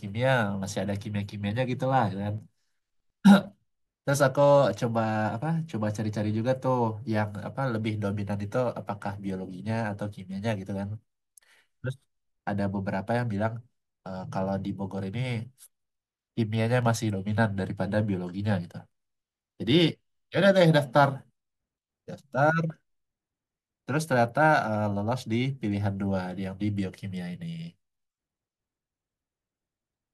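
A speech recording with three single sharp clicks, at 2.38 s, 14.98 s and 16.83 s, each likely caused by dropped samples: a fraction of a millisecond goes missing, so the waveform leaps straight to a later value and a thin vertical line crosses the spectrum. Unlike a dropout, which leaves an audible gap or hole in the speech, nothing is heard to be missing here, only the isolated tick of the discontinuity.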